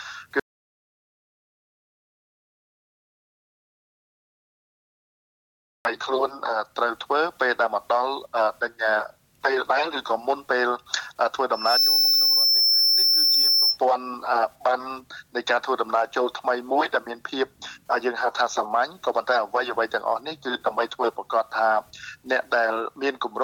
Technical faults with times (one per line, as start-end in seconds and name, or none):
0.40-5.85 audio dropout to silence
11.53-13.78 loudspeaker feedback squeal